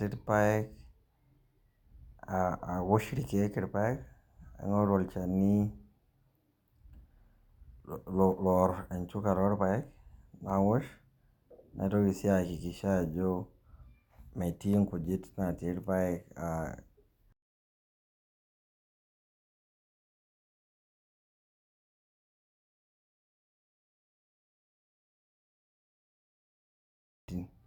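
No technical faults can be heard anywhere in this speech recording, and the signal holds steady throughout.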